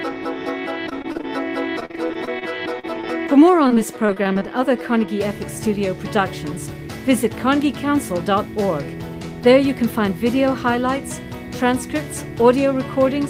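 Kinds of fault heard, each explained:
Repeated packet loss (robotic sound): Runs of lost or late packets, each gap patched by extending the preceding sound before the next gap arrives. It is heard three times, from 0.89 to 1.25 s, 1.80 to 2.44 s and 3.68 to 4.43 s, turning the audio choppy and mechanical, with gaps up to 41 ms and roughly a sixth to a third of each stretch synthesized. A spectrogram shows smeared, frozen harmonic blocks alternating with real detail; the waveform shows repeated, overly regular cycles.
Short concealed packet loss: A single brief dropout filled by continuing the last sound and then blending back into the real signal. It occurs at 2.80 to 2.85 s, 3.01 to 3.05 s and 3.27 to 3.30 s, covering holes of about 20 to 40 ms and heard as a quick smear or wobble. On a spectrogram each is a narrow column where the fine structure goes flat or blurred; the waveform shows a short stretch of copied, slightly decaying cycles with a soft seam.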